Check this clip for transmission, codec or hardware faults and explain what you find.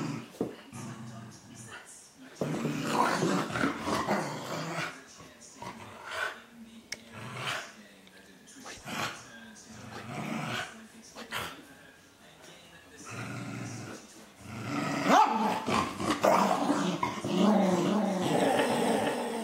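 One fault shows up, a doubled audio track from 17.65 s to the end of the clip. A second copy of the signal is most likely entering the mix through a slower capture path, so the same audio plays twice, offset by about half a second. The trailing copy is full-band and about 5 dB quieter than the original. It has no decay or room colouring. It cuts in abruptly at 17.65 s, which gives the sound a hard, echo-like stutter until the end.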